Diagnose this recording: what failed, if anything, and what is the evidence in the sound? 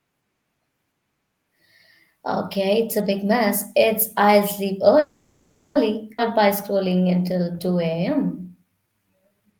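Call audio freeze, 4.99 to 5.77 s. The speech stops moving and the last sound is carried on as a fading buzz or hiss for about 0.76 s, never dropping to true silence. When it resumes, it picks up exactly where it left off, with nothing lost, so the playout delay has grown by that same 0.76 s. This is a network-stage stall: packets were likely held up in transit while the jitter buffer ran dry and the receiver concealed the gap.

Skip ahead, 6.17 to 6.20 s. Playback jumps forward with only a brief join of about 10 ms, and roughly 0.4 s of speech is missing across it, so the two sides butt together almost directly. The stretch was dropped either in transit or by the jitter buffer. With later audio already queued, a stretch was discarded, pulling the delay back down by about 0.4 s.

Jitter buffer slow-down, 6.73 to 9.46 s. Over this stretch the speech runs at about 87% of normal speed with its pitch unchanged, so sounds are drawn out. 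The total added is about 355 ms. At the buffer stage the receiver was rebuilding its reserve by repeating single pitch periods and fragments of pauses many times in succession, stretching time without transposing the sound.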